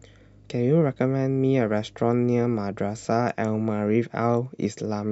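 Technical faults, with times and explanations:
0.00–3.05 s, mains hum: a steady low 50 Hz drone sits roughly 30 dB under the speech, power-line current leaking in through a ground loop or transformer.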